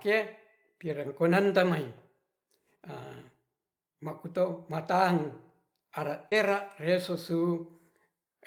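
This speech clip has three network faults. From 0.87 to 0.93 s there is a lost packet rebuilt from error correction: about 40 ms, which fits two separate packets, plays from the low-bitrate backup copy carried in the following packet. The audio never drops out, but that stretch turns rougher and noisier, and playing a real copy rather than a guess is what separates it from concealment. At 6.29 s comes a short concealed packet loss. For 20 ms nothing arrived, so the decoder extended the preceding sound, and the result is a brief smear or wobble rather than the grainy texture of a backup copy. Error correction then took over immediately. From 6.31 to 6.33 s a further 20 ms is rebuilt from the next packet's copy, so the invented fill gives way to a coarse but real rendering before the audio returns to full quality.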